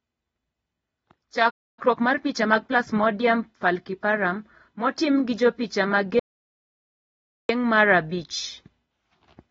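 From start to finish, the speech is dull. Sibilants sound smeared and fizzy, and sustained vowels warble. This is likely AAC compression, in the AAC-LC form, at a low bitrate. The damage is plainly audible and fits a rate near 24 kbps. At that rate, the encoder cuts the top of the spectrum and quantises coarsely, leaving gaps and patched bands.

At 1.5 s, the speech stops dead. The silence lasts about 0.27 s, until 1.79 s. This is a playback stall. The player likely ran short of data, or its thread was held up, so output simply halted. The break is an unnatural hole in the middle of the flow.

Right after the stall, from 1.79 s to 2.87 s, the speech runs fast. It plays at 1.25 times normal speed, yet the pitch stays put. This is time-compressed catch-up. The player trims the backlog built up during the stall. It cuts out small slices and cross-fades the joins.

At 6.19 s, just after "motim gi jopicha ma", the audio drops out to silence. 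The gap runs about 1.3 s, to 7.49 s, where the speech resumes with "mar rh abich". The silence is total, with no room tone at all. The input was likely lost, and the recorder kept writing silence. Whatever was said during the gap is gone.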